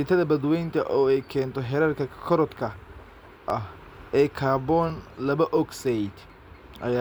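A speech clip with clock drift buffer slips: about five clicks between 0.71 s and 6.3 s, spaced a steady 1.4 s apart. Each is likely a few tens of samples dropped or repeated from a clock mismatch of several hundred ppm; unlike random dropouts, the spacing never varies.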